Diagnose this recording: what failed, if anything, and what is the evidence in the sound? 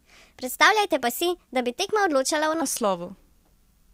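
From the start to 2.62 s the speech runs at the wrong speed, about 1.23 times too fast. Pitch rises with it, by about four semitones. The voice sounds high and hurried, then drops to natural pitch and pace for the rest. The stage is likely playback or editing. That section was clocked at the wrong rate. Speed and pitch moved together, so it was a rate mismatch, not pitch processing.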